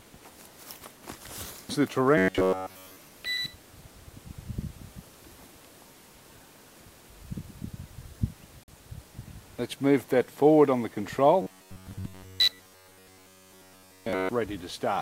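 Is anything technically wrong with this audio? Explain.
Yes. From 2.18 to 2.97 s and from 11.42 to 14.29 s there is robotic sound from repeated short buffers. Audio likely arrived too slowly, so the player looped a fragment of roughly 10.7 ms, imposing a metallic 93.8 Hz buzz. The first stretch is almost entirely repeated material; the second mostly. On a spectrogram this shows as evenly spaced horizontal harmonic lines at multiples of 93.8 Hz.

At 8.63 to 8.68 s a Bluetooth dropout silences the output for about 43.5 ms, likely because a few packets missed their deadline, then the sound resumes further along. The waveform shows a flat gap, and the spectrogram a narrow blank vertical band.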